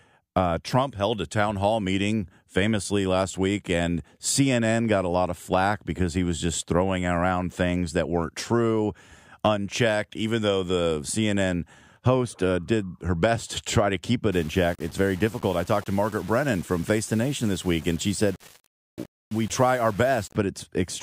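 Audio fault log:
14.32–20.36 s, low bit depth without dither: after "to try to keep", speech turns grainy as quiet parts sputter, likely from 6-bit rounding; waveform shows stair-steps, spectrogram a signal-following noise haze about 25 dB down.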